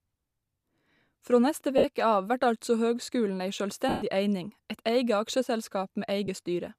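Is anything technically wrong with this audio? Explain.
Yes. At 1.78–1.84 s, 3.89–4.02 s and 6.26–6.28 s the speech briefly dissolves into a hissy, smeared wash, and the longest gap, 130 ms, fades toward silence. These are lost LE Audio frames: the LC3 decoder fills each gap by repeating the last spectrum with scrambled signs and letting it decay. The gap lengths of 60, 130 and 20 ms fit runs of 10 ms frames. A faint grainy edge throughout the clip is likely from light Bluetooth LC3 compression.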